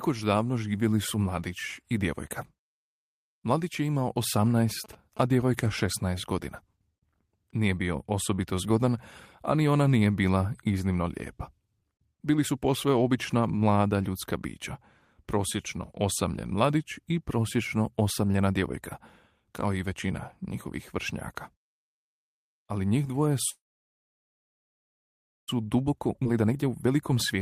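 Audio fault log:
4.23–5.80 s, GSM signalling bursts: Right after "je imao", a galloping dit-dit-dit of short buzzes sits under the speech at about 20 dB below it, the buzz pitched at 217 Hz. A nearby 2G phone is sending short groups of radio bursts while signalling. The audio circuit picks up and rectifies them, and the 217 Hz burst rhythm comes through as an audible buzz.
23.49–25.50 s, call audio freeze: After "njih dvoje", the last sound hangs on briefly as a fading buzz, then drops into about 1.9 s of silence. The whole pause lasts about 2 s, and the speech resumes exactly where it stopped, with nothing lost. The likely cause is packets held up in transit until the jitter buffer ran dry. The receiver stretched the final sound to cover the wait, which added roughly 2 s of delay.
25.58–27.38 s, jitter buffer speed-up: The speech runs hurried, at about 118% of normal speed, but the pitch stays the same. 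After the freeze, the jitter buffer held far more audio than it aims for. To work off the excess delay, the receiver repeatedly cut out short pieces one or a few pitch periods long. Roughly 0.3 s of audio was trimmed away over this stretch, which is why the pace sounds rushed.
26.24–26.27 s, skip ahead: Within the hurried stretch, playback suddenly jumps forward, and the two sides are joined by only a 15 ms patch. About a second of speech is simply missing. A block of audio was dropped while later audio was already waiting. That cut roughly a second of the delay left from the freeze, far faster than the gradual speed-up around it.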